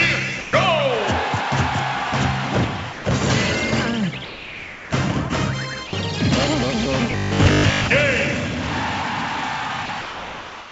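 Sound dropped by the voice detector hits at 0.41–0.53 s, 2.93–3.05 s, 4.25–4.91 s and 5.87–5.93 s. Each time the sound gives way to steady noise or near silence. The sender's detector likely judged the sound to be background and stopped sending, so comfort noise filled the gap.

From 7.12 to 7.88 s comes robotic sound from repeated short buffers. A rigid, metallic 50 Hz buzz replaces the natural texture. It likely comes from a 20 ms stretch being repeated while new audio arrives too slowly, so most of the real sound is skipped.

The detector drops sound again at 9.86–9.89 s, and from 10.01 s to the end. The same steady noise or near silence stands in. Through the whole call path, nothing is heard above 8 kHz.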